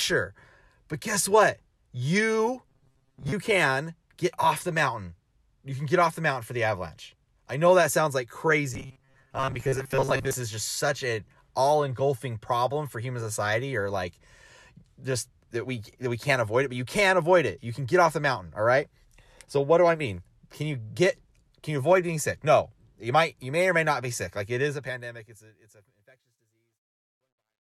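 From 2.68 to 3.32 s, ending just before "can get off the", and again from 8.74 to 10.35 s, between "know that sounds like" and "is just such a", the speech turns into a rigid metallic buzz fixed at 134 Hz. This is robotic sound from repeated short buffers, likely caused by audio arriving too seldom, so a segment of about 7.5 ms is replayed and roughly half the real audio is skipped. A spectrogram shows evenly spaced horizontal harmonics at multiples of 134 Hz, and the waveform shows a repeating pattern at that period.

From 24.55 s the speech fades out toward the clip's end, but the fade carries truncation distortion. The fade stage keeps too few bits and adds no dither, which fits a 12-bit stage. From 25.9 s onward, as the level nears the smallest step, the tail turns gritty. On the waveform the quiet end appears as a few square stair-steps. A spectrogram shows broadband speckled noise riding the decaying signal.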